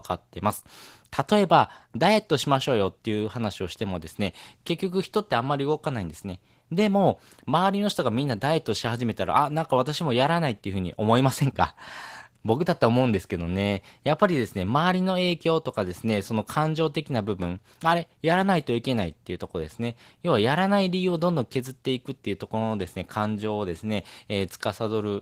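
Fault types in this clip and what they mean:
Opus voice compression: speech sounds plainly hoarse and slightly robotic, fitting Opus hybrid coding near 16 kbps. It is prediction-coded below 8 kHz with a coarse transform layer above. A spectrogram shows full bandwidth but patchy, smeared energy above 8 kHz, in blocks fitting 20 ms frames.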